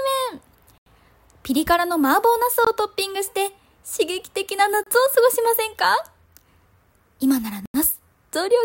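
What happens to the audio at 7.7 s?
The sound cuts out for 86 ms, 7.66 to 7.74 s, then resumes. That's likely a Bluetooth stall, with the headphone buffer starved while packets got resent.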